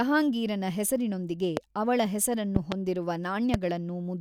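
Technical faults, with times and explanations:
1.57–1.59 s, 2.56–2.74 s and 3.54–3.56 s, loud pop: sharp pops roughly 15 dB above the speech, a double one after "ಹೆಸರಿನೊಂದಿಗೆ ಅವಳ", likely voltage spikes from a switch or static.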